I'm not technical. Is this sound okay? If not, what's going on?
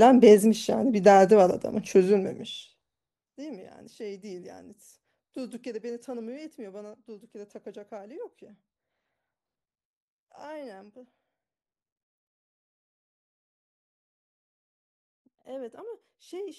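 Yes, no faults are audible.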